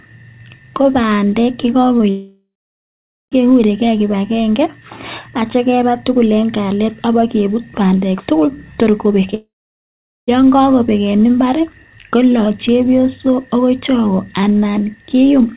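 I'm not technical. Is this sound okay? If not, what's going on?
No. At 1.98 s, and again at 9.27 s running into 9.30 s, there is short concealed packet loss: a few hundredths of a second of audio arrived too late, so the receiver patched each gap by extending the previous sound, heard as a brief smear or wobble.

From 2.10 to 3.33 s and from 9.34 to 10.29 s the sound cuts out, most likely a long network dropout. Each starts with a fading buzz or hiss, then about 0.8 s of silence, and the audio resumes with that stretch lost. The call connection also limits the sound to below 4 kHz, giving it a narrow, telephone-like quality.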